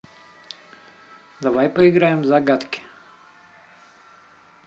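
A short speech recording with no technical fault to report. Nothing in the audio, at any moment, points to a problem in how it was captured or carried.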